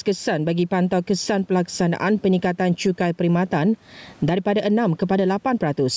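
Gain pumping runs through the whole recording: the gain swings by roughly 15 dB each time the speech gets loud, so the level breathes and loud and soft passages sit squashed together. The likely cause is input gain set far too high with a fast limiter clamping it. On a waveform the envelope looks flattened, with the noise floor rising between phrases. On a spectrogram the room noise, about 41 dB below the speech, brightens in gaps beneath an 8 kHz ceiling.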